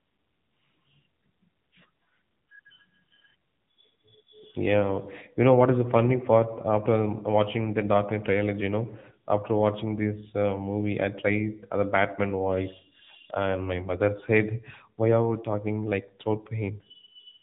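Throughout, an AMR narrowband mobile codec at a low rate near 8 kbps cuts everything above 3.8 kHz, leaving the speech muffled, buzzy and synthetic.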